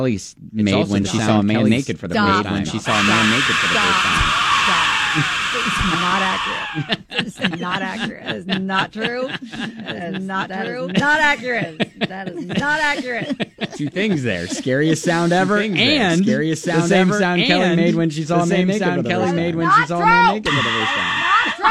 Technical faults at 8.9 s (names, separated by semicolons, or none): doubled audio track